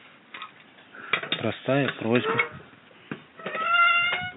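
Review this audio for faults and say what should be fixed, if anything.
No technical faults turn up in the speech signal, so nothing needs fixing, and the only background is the room's own ambient noise, which sits about 34 dB below the speech.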